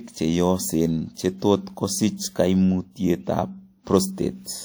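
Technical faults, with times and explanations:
1.14 to 1.17 s, pre-echo: a short hiss rises about 29 ms before a sharp onset in the speech, and the attack sounds softened and smeared. The coding block holding this onset had quantisation noise sized for the loud moment, spread evenly across the block, including the near-silent stretch before the attack. A spectrogram shows a thin broadband haze just ahead of the onset; the waveform shows low-level fuzz where it should be flat.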